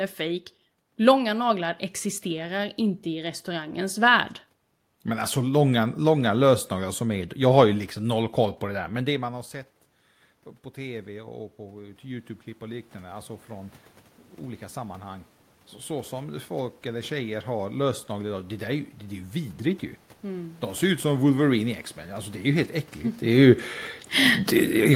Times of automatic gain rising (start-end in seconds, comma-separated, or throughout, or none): 10.76-20.90